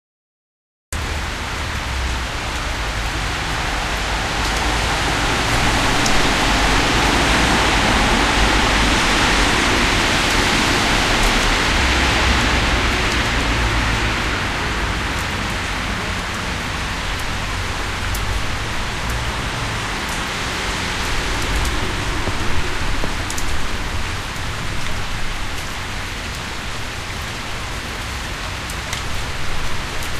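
A cut-off start runs from 0.00 to 0.93 s: the clip sits in digital silence, then the sound begins abruptly at 0.93 s, already under way. Capture evidently started late, so there is no natural attack or fade-in, just a hard edge mid-sound.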